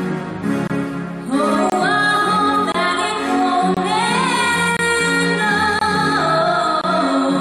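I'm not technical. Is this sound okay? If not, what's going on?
No. There is a gap between chunks. The sound arrives in one-second pieces, and a brief silence of about 23 milliseconds sits between them. Nothing is lost, but you hear sharp little holes at 0.67, 1.70, 2.72, 3.74, 4.77, 5.79 and 6.81 seconds.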